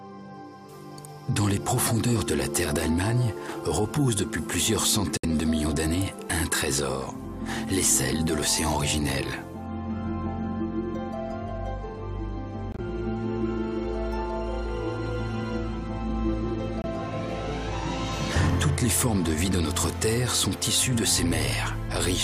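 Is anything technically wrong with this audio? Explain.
Yes. Nine corrupt frames were muted in three places: at 5.17–5.25 s, 12.72–12.80 s and 16.82–16.85 s. Damaged compressed frames were rejected by the decoder, and the player substituted silence. Each gap, of about 80, 74 and 34 ms, cuts in and out abruptly, which fits one to a few frames. Unlike a dropout that loses samples, the surrounding audio keeps its timing with no jump ahead. Unlike concealment, nothing fills or smooths the gap; it is plain silence.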